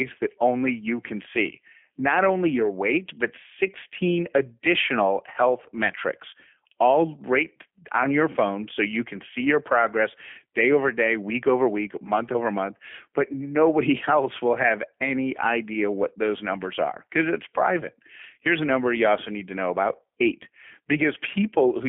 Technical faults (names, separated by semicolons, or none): G.729 codec